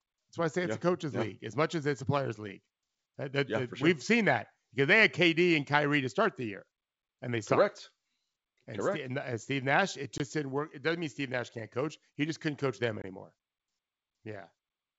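Packet loss on an ADPCM call occurs twice in this G.722 wideband speech, each time dropping roughly one packet, about 20 ms of audio that gets replaced with silence. The first gap falls at 10.18 to 10.21 s, right before "didn't work". The second falls at 13.02 to 13.05 s, just after "just couldn't coach them". Each gap is heard as a hard-edged hole, and because the decoder's adaptive predictor and step size lose track of the sender's during it, the speech comes back with slight distortion that settles within a few tens of milliseconds.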